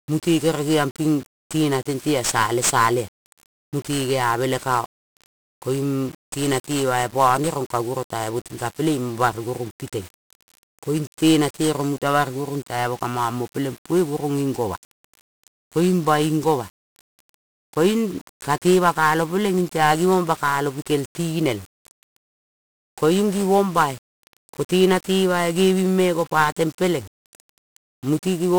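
From start to finish the speech carries heavy 1-bit DFPWM compression damage. Each sample nudges an adaptive level up or down, so strong broadband quantisation noise rides on everything, leaving the voice fuzzy and crackly with its treble buried in hiss, consistent with a 48 kbit/s stream.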